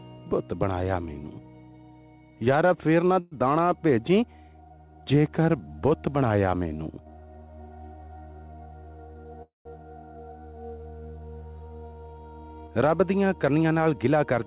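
At 3.2 to 3.35 s a call audio freeze stretches the last sound into a fading buzz or hiss, likely because delayed packets emptied the jitter buffer. Unlike a dropout, nothing is lost: the audio resumes where it stopped.

From 9.09 to 9.34 s a jitter buffer speed-up runs the sound at 116% speed, trimming roughly 50 ms in short pieces. It sounds hurried but keeps the same pitch, which separates it from a pitch shift.

A second freeze, from 9.42 to 9.68 s, holds the sound and then goes silent for 140 ms before continuing intact.

A gentler speed-up, at 109%, runs from 13.34 to 14.45 s and removes about a tenth of a second.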